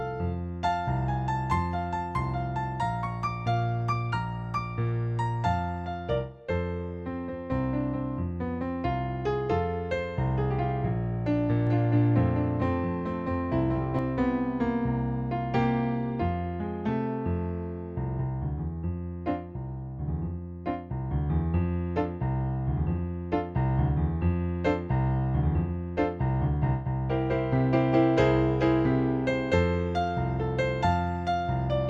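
From 11.67 to 13.99 s, a doubled audio track appears. A second, full-band copy of the sound trails the original by roughly 0.4 s. It sits about 5 dB below the original. The copy has no decay or room tone, so it reads as a clean, out-of-step repeat rather than an echo. It cuts in and out abruptly at both ends. The likely cause is the audio being captured twice, once through a slower path.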